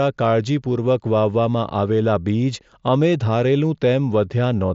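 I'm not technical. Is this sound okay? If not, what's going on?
Yes, no faults here.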